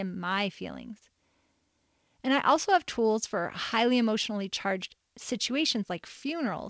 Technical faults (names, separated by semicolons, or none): none